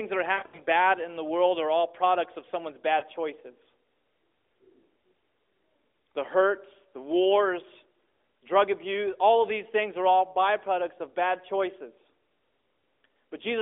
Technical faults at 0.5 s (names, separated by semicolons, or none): lost AMR speech frames